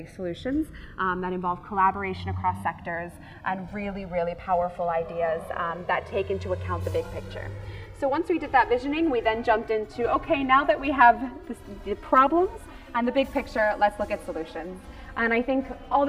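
Throughout, the channels drift apart: mismatched clocks slide one side to roughly 4 ms late, so mono summing sweeps comb notches, visible as slowly moving spectrogram stripes, producing slow flanging.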